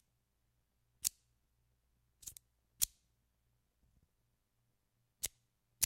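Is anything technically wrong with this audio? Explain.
No, nothing technically wrong can be heard here.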